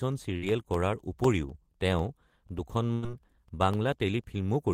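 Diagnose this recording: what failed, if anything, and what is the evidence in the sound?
Periodic USB or driver dropouts at the driver/buffer stage: from 0.25 s to the end, brief silent gaps every 0.25 s tick during speech. On a spectrogram these are thin evenly spaced broadband vertical lines.

A burst of packet loss on the network path occurs at 0.37–0.46 s and 2.93–3.04 s. The receiver held and faded the last sound for about 46 ms and then 94 ms, skipping roughly 40 ms and 100 ms. This shows as smeared, fading horizontal bands, then an abrupt jump.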